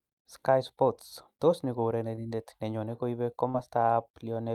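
At 2.15 s there is a short stall from a late packet: one packet arrived after it was due, so the jitter buffer ran dry and the receiver held the last sound for about 18 ms until it came. Nothing is lost, but the playout delay grows by those same 18 ms from here on. What you hear is a brief hold in the speech, with a faint buzz or dip, ending by 2.20 s.

At 3.50 s comes short concealed packet loss. About 40 ms of speech never reached the decoder in time. The receiver filled the gap by extending the preceding sound, for roughly 39 ms, and then blended back into the real signal near 3.57 s. It comes across as a short smear or wobble.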